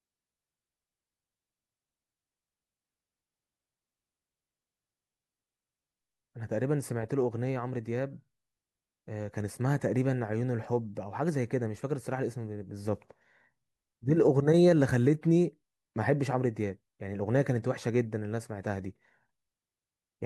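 Nothing in this speech recording stands out as a technical fault; there's no moment where the sound trips up or goes wrong.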